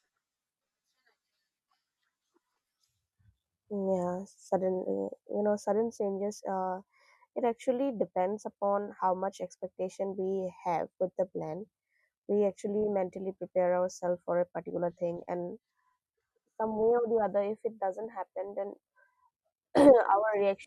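From the start to 13.8 s, ending just before "for a particular thing", a gritty inharmonic fizz sits roughly 30 dB under the speech. This is crude rate conversion, samples repeated unfiltered at a 3:2 ratio, which fits 32 kHz to 48 kHz.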